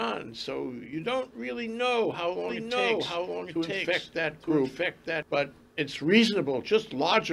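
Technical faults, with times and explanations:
2.49 to 5.23 s: doubled audio track. An identical, dry copy trails about one second behind at roughly equal loudness, likely from a second, slower capture path.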